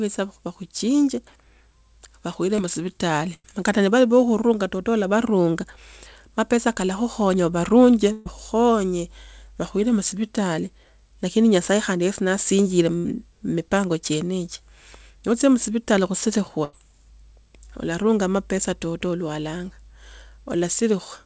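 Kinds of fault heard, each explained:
Short concealed packet loss: About 20 ms of audio missed the decoder, so the receiver stretched the previous sound into a brief smear just before "musivitali kata ni vali".
Burst of packet loss: Runs of 60 to 140 ms were lost, so the receiver held and faded the last sound, then jumped ahead, briefly going silent at 3.34 s.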